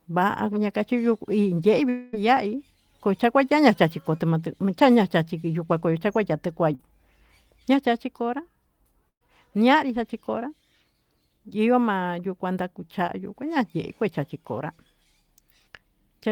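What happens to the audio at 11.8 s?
Nothing goes wrong at 11.8 s: the speech continues intact through that moment, with no dropout, click, distortion or other break in the signal.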